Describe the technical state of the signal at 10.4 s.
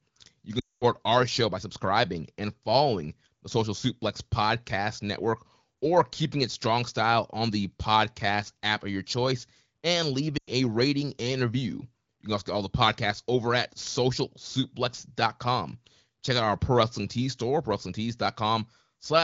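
At 10.4 s the speech smears into a brief frozen, buzzy hold that sags quickly toward silence, then returns thin and rough for a moment. These are lost AMR speech frames, spanning roughly 10.37 to 10.52 s. About 100 ms of coded speech, which fits five 20 ms frames, failed its checks. The AMR-WB decoder repeated its last good pitch and vocal-tract settings at shrinking gain, fading faster than narrowband would.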